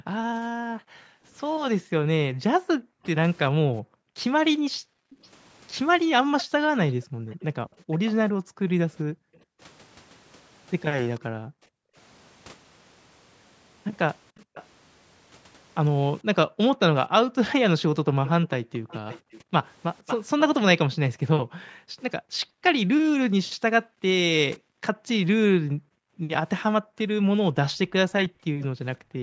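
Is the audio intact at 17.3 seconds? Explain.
No. At 17.3 seconds the clip sits inside a stretch of background gated by the echo canceller, running from 16.46 to 19.58 s. While the far-end loudspeaker played, the canceller pulled the microphone down hard, by about 40 dB at its deepest, so the room sound dips away for a total of under a second before returning. Unlike a packet-loss dropout, the level is ducked and released rather than cut with clicks or garbled fragments.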